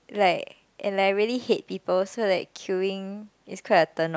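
Nothing stood out on listening to this speech recording; no technical problem could be heard at any point.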